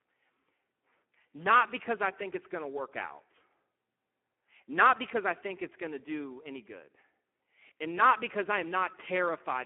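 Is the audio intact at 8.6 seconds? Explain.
No. At 8.6 seconds, as throughout the clip, the speech carries Speex codec damage consistent with a low setting near 8 kbps: starved excitation leaves it hoarse and noisy. A spectrogram shows energy confined to about 200 Hz to 3.4 kHz, with nothing above 3.8 kHz.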